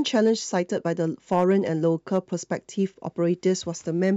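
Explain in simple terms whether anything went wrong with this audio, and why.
Hard clipping shows up twice, from 0.16 to 0.57 s and from 1.32 to 2.18 s. The peaks got chopped flat, adding crackle, and the second stretch sounds harsher.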